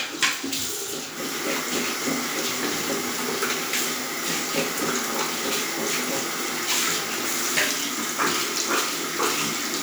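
No faults to report anywhere in the recording of sounds.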